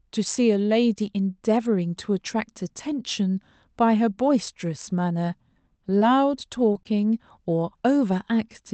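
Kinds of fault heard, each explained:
Short concealed packet loss: Three brief stretches of this speech never arrived in time, near 5.99 s, 6.73 s and 6.83 s. Each gap was about 20 ms. The receiver covered each one for 15 to 21 ms by extending the sound just before it, then blended back into the real signal. Each shows as a tiny smear or wobble in the voice rather than a silent hole. The three cluster within one second.
Lost packet rebuilt from error correction: In each of those three losses, the last 20 ms came from a low-bitrate backup copy carried in the following Opus packet. This covers 6.01 to 6.03 s, 6.75 to 6.77 s and 6.85 to 6.87 s. Because the decoder played that copy, there is no dropout. Those short slices sound rougher and grainier than the surrounding speech. The call itself is limited to about 8 kHz, so no extra treble loss stands out.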